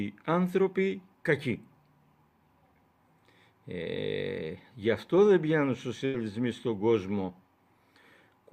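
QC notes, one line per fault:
6.05 to 6.16 s, burst of packet loss: the sound stalls into a held, fading smear for about 84 ms, then jumps ahead with roughly 80 ms gone. Consecutive packets arrived too late or not at all, so the receiver stretched and faded the last audio before resuming.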